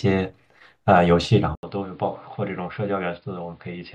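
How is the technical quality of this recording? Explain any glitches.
The recording has one clear fault. At 1.55 s the sound cuts out for about 80 ms, then comes back duller, boxier and roughly 10 dB quieter, with new background noise sitting about 35 dB below the speech. Nothing above 5.1 kHz remains from there to the end. This is most likely an input switched to a poorer device: the system changed to another microphone or a headset's call profile with a narrower band, its own tone and its own background noise.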